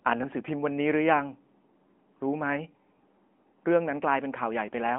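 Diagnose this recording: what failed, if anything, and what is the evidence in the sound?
The speech sounds thin, boxy and plainly buzzy throughout, confined to 200 Hz–3.4 kHz with nothing above 3.7 kHz. This is codec-stage damage from the AMR narrowband mobile codec: 8 kHz sampling and a pulse-driven vocal-tract model, at a rate consistent with 10.2 kbps.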